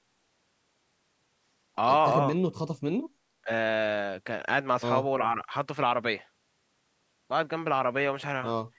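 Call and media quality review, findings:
Speech suppressed in double talk, 3.42–3.49 s: level dip of about 20 dB, roughly 70 ms. Likely the echo canceller's suppressor mistaking near-end talk for loudspeaker echo during overlap and attenuating both.

Same fault, 5.32–5.51 s: shallower dip of about 10 dB, around 100 ms affected within that window. Likely the same suppressor misjudging simultaneous talk, partial gain cut on the near-end speech.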